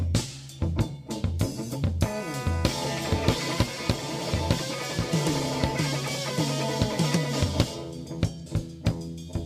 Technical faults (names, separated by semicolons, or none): none